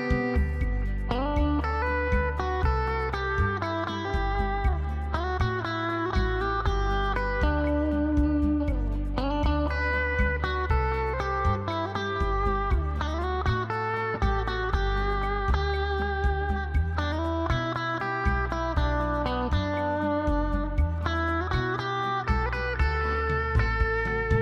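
No technical faults can be heard anywhere in the audio. Nothing in it calls for a time or a description.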